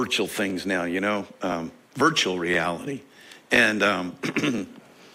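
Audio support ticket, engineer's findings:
Overlapping chunks: brief stutter-click at 0.50, 2.54, 3.56, 4.58 s. 1 s chunks start 20 ms early, so each join replays 20 ms.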